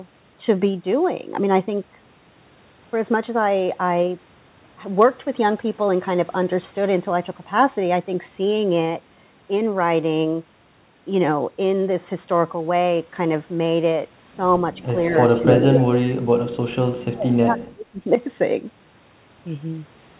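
From 14.82 to 14.87 s, an echo leak appears. The far side's echo canceller likely let part of its loudspeaker pickup through, so a copy of the speech returns 234 ms late as a faint scrap about 25 dB below the talker. From 14.92 to 14.96 s, speech suppressed in double talk follows. The canceller, likely confused by both sides talking at once, pulls the talker down by roughly 5 dB, a brief dip. The leak returns from 15.14 to 15.30 s at about 20 dB down. From 15.39 to 18.05 s, the suppression deepens, gouging the speech by as much as roughly 35 dB across about two seconds of suppression. Inside that stretch, the echo surges at 15.51 to 15.55 s to equal level and again at 15.73 to 15.84 s at about 5 dB below, heard as loud, 4 kHz-limited repeats through the G.711 call path.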